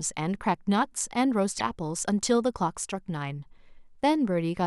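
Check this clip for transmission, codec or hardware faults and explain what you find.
There's one fault in this speech clip. From 1.58 to 1.61 s the sound skips forward with a brief glitch. That's likely a broken MP3 bit reservoir: frames were cut, and the next one reached back into borrowed space and decoded the wrong bytes. The MP3 frames here are about 26 ms long.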